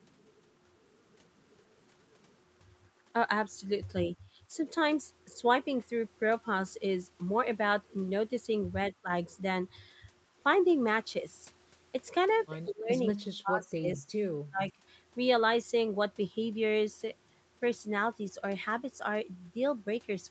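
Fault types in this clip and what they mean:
Background gated by the echo canceller: the room sound dips briefly, by about 8 dB near 4.2 s, because the echo canceller clamped the microphone while the loudspeaker played.
Speech suppressed in double talk: the speech dips sharply in short bursts between 4.5 and 14.7 s, likely the echo canceller turning it down while both sides talked.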